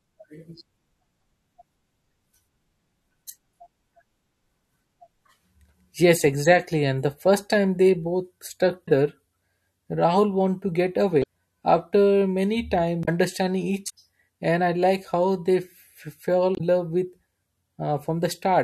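Damaged data in a compressed stream shows up five times in this speech: at 8.85 to 8.88 s, right after "first time they both"; at 11.20 to 11.24 s, between "wanted to get" and "after many"; at 13.02 to 13.09 s, following "after many"; at 13.86 to 13.90 s; and at 16.53 to 16.61 s. Each lasts roughly 40 to 80 ms and sounds like a brief chirp, squawk, click or short hole. Corrupted bytes made the decoder misread those frames and lose sync until it found a valid frame header again.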